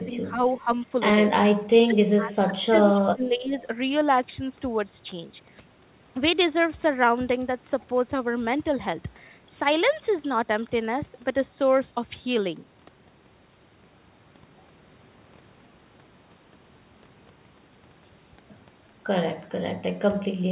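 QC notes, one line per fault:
0.46–0.61 s, echo leak: a faint delayed copy of the speech appears about 335 ms behind the original, roughly 30 dB below the direct sound. The fixed delay and low level point to a loudspeaker at the other end feeding its own microphone, likely with the echo canceller leaving a residue that was sent back down the line.
1.86–1.99 s, 2.15–2.54 s, 3.05–3.56 s, speech suppressed in double talk: the talker's level is pulled down in three short stretches, by around 15 dB in the first and third and closer to 25 dB in the second, the longest at about half a second. The speech sounds ducked, then recovers. These dips likely come from both sides talking at once, with the echo canceller unable to separate near speech from loudspeaker echo and attenuating everything.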